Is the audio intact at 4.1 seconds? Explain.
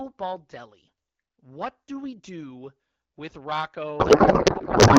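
No. At 4.1 seconds the clip is inside a codec payload misread that runs from 3.99 s to the end. The decoder keeps receiving frames that look valid but extracts the fields from the wrong bit positions, which points to octet-aligned AMR-WB payloads being parsed as bandwidth-efficient. Before the fault the 12.65 kbit/s AMR-WB speech is clear. From this span on it is replaced by garbled noise and warble that barely tracks the speech.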